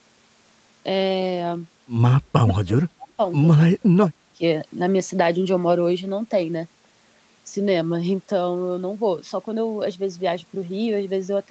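From 2.17 to 3.19 s, then from 3.53 to 4.42 s, the speech sinks by around 30 dB. The likely cause is speech suppressed in double talk. The echo canceller mistook the talker for echo and turned the speech down.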